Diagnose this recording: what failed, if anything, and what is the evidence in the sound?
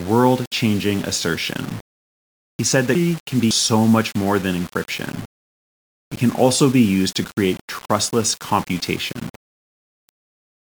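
The speech is grainy from start to finish. The grit tracks the speech level, and quiet tails sputter or vanish. Error sits roughly 20 dB below the signal. The likely cause is low bit depth without dither at sample-format conversion, consistent with undithered 6-bit rounding.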